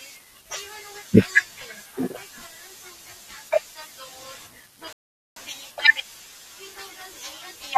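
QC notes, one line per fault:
4.93–5.36 s, rebuffering stall: the speech drops abruptly to silence for about 0.44 s, then picks up exactly where it broke off, with nothing skipped. Playback ran dry of downloaded audio and waited for more data, so time is inserted rather than content lost. On the waveform this is a flat, near-silent gap with hard edges on both sides. On a spectrogram it is a clean vertical band of empty frequency content.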